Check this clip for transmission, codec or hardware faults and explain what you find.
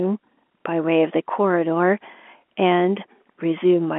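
Nothing faulty can be heard.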